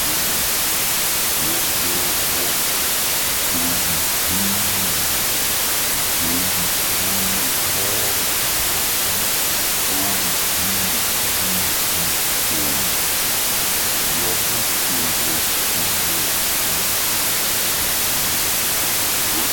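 From start to end, a wrong sample width: 32-bit data read as 16-bit splits each sample in two, giving loud broadband hiss over half-speed, octave-low speech, a noise-filled waveform and spectrogram.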